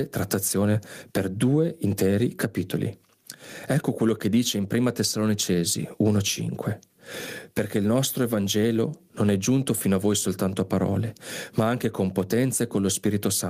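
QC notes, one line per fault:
Throughout: gain pumping. The gain swings by roughly 15 dB, leaving the speech squashed and flat in dynamics. Likely cause is input gain set far too high, with a fast limiter clamping each peak.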